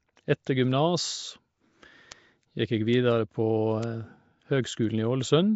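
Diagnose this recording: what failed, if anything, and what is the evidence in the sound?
Codec stage. The speech is rough and smeared, with a hissy, underwater halo throughout. Nothing is present above 7.7 kHz. This is likely Nellymoser compression, at a quality that fits a 32 kbps stream. The codec codes short blocks at fixed bit depth and fills starved bands with noise.

Storage or digital link stage. Four bit error spikes sound as isolated ticks at 0.99, 2.12, 2.94 and 3.83 s. The first three are single samples; the last spans two. A flipped bit makes the value jump by a power of two and return, giving broadband clicks unrelated to the speech.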